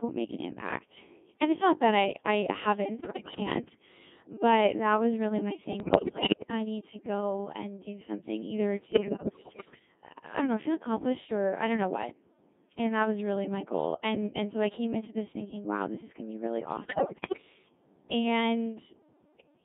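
The whole clip runs through a Codec 2 vocoder, and it sounds heavily damaged: robotic, buzzy speech squeezed into roughly 200 Hz to 3.6 kHz, with the character pointing to the 1.6 kbit/s mode. The decoder rebuilds the voice from pitch, voicing and envelope data, so the original waveform is gone.

Then there are bursts of bit errors on digital voice radio at 3.00–3.40 s, 5.80–6.51 s, 8.92–9.85 s and 16.84–17.42 s. Flipped bits corrupt whole frames of parameters, so the voice lurches in pitch and level and turns into warbly, bleepy gibberish. The damage sounds like a fairly high error rate, somewhere in the tens of percent.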